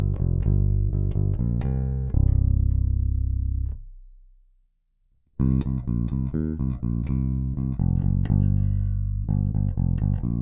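No technical faults occur at any point in the audio.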